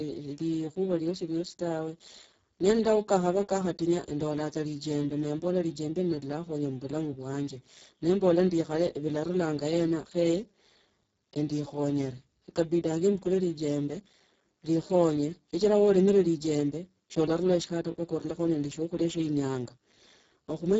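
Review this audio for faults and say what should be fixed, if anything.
Speex codec damage throughout: heavy CELP coding leaves speech hoarse and noisy, which fits a bitrate near 6 kbps, with nothing above 7.7 kHz. Prevent it with a higher-quality Speex setting or a modern codec.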